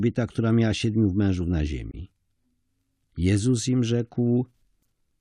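After "miała siedmiu mężów na", a corrupt frame decoded at 1.91 to 1.94 s throws a sharp chirp as flipped bits misplace energy; a fainter blip follows at 4.82 s.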